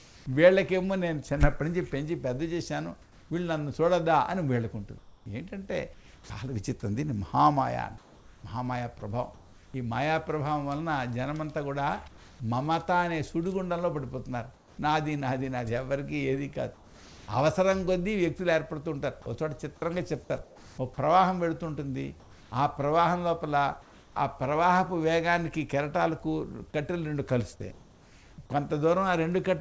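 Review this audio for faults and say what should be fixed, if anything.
Comfort noise in place of the background: within 0.0–0.26 s, 3.02–9.74 s, 12.08–12.40 s, 14.54–17.28 s, 20.44–24.16 s and 27.72–28.38 s, the quiet background turns into steady, featureless hiss; in the first, third and last of these the background sits roughly 25–28 dB below the loud passages and the hiss stays at the same level. This is likely discontinuous transmission: the sender stopped sending during pauses, and the receiver synthesised shaped noise to fill them. To prevent it, disable DTX on the sending side.

Sound dropped by the voice detector: at 9.0 s, about 10 ms of sound gives way to a brief patch of comfort noise. The sender's voice detector likely misjudged a bit of sound as background and cut it, and the hiss is what the receiver filled the gap with. Turning off DTX, or making the detector less aggressive, would stop this. 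The content above 8 kHz is missing throughout, which fits a G.722 call link at 64 kbps.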